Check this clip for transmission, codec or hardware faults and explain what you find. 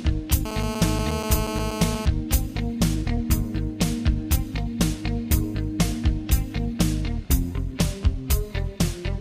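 One fault is present: GSM phone buzz from 0.45 to 2.06 s. A nearby 2G phone in a call transmits bursts 217 times a second, and the audio circuit rectifies them into a steady, hard, raspy buzz with many harmonics, about 6 dB below the signal. Unlike smooth 50 or 60 Hz mains hum, it sits at 217 Hz and sounds far harsher.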